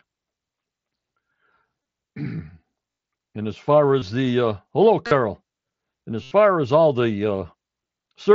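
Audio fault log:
1.83–6.31 s, concealed Bluetooth headset packet loss, five gaps: 1.83–1.85 s, 2.91–2.98 s, 3.99–4.02 s, 5.07–5.11 s and 6.23–6.31 s. They last about 23, 68, 23, 45 and 83 ms. Packets from the headset never arrived. The receiver filled each hole by repeating a matching stretch of the preceding waveform at full level. The longer gaps at 2.91 s and 6.23 s turn into a buzzy held tone, with a slight warble as real sound resumes. The lengths are multiples of 7.5 ms, which points to runs of lost mSBC frames.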